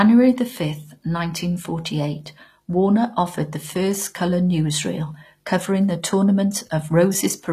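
From start to finish the speech carries plainly audible codec damage. Sibilants sound gritty and lisping, and the upper band has a metallic sheen that doesn't quite match the body of the voice. Nothing reaches above 15 kHz. The likely cause is HE-AAC compression: the treble is rebuilt by replicating lower bands upward rather than coded directly, so its harmonics misalign with those below. The degree of damage fits a low rate of around 24 kbps.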